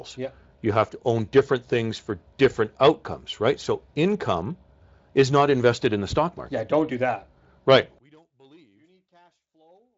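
From 7.98 s to the end, the speech drops by about 38 dB, leaving only a faint residue. The likely cause is one channel inverted: one stereo side has reversed polarity, so the content common to both sides cancels when they are summed to mono.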